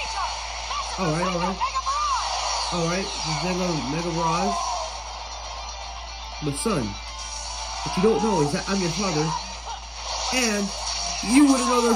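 From 10.37 s to the end, pre-emphasis left on: a 50 µs FM treble boost was never undone, lifting 10 kHz about 11 dB over 1 kHz. The result is thin and sibilant, with visibly brightened upper spectrogram bands.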